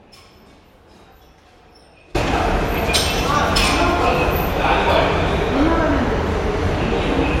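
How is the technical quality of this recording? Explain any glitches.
The recording opens with a dropout. From the start until 2.15 s, only a faint trace of the sound remains, roughly 30 dB down, before it abruptly returns: an audio dropout to a faint residue, likely from the signal being lost while the downstream path stayed live.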